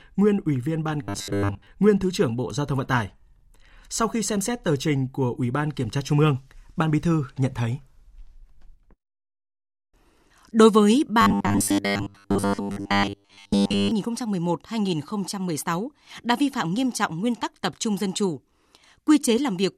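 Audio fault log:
1.03–1.67 s and 11.21–13.91 s: robotic sound from repeated short buffers. The speech becomes a rigid metallic buzz pinned at 100 Hz, likely from a 10 ms stretch being replayed in place of most of the incoming audio. Unlike a flanging or comb effect, the buzz rate stays fixed instead of sweeping.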